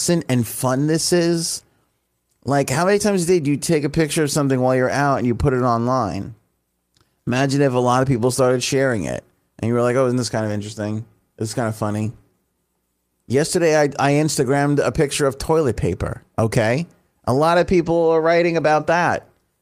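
Near the end, five separate packets were lost and each was rebuilt from error correction: the decoder played the low-bitrate backup copy carried in the following packet, so no gaps open. Each rebuilt stretch lasts 20 ms, at 17.85, 18.03, 18.17, 18.49 and 18.59 s, the first two just after "lot of". Those brief patches sound rougher and noisier than the surrounding speech, like quick grainy flickers.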